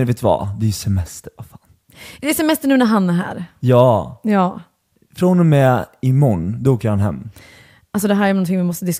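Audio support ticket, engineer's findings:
No fault found in the audio on this ticket; nothing to report in the engineer's findings.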